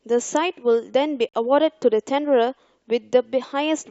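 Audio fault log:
1.29–1.35 s, corrupt frame muted: bit errors damaged a short run of compressed speech frames, the decoder rejected them as undecodable, and the player filled the gap with digital silence rather than attempting to conceal it. The result is a 60 ms hole that opens abruptly, a length that points to several consecutive short codec frames. Because the muted span holds its place in time, the speech resumes on schedule with no drift.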